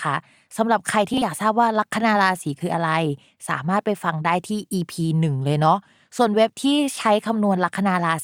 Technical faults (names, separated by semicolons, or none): frames out of order